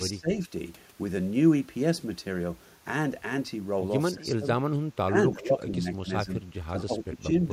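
The speech dips in chopped pieces, by up to roughly 20 dB, at 0.11–0.42 s, 4.14–4.46 s, 5.07–6.32 s, 6.68–7.33 s and from 7.49 s to the end. This is likely speech suppressed in double talk: the echo canceller couldn't separate talker from loudspeaker echo, so it attenuated both.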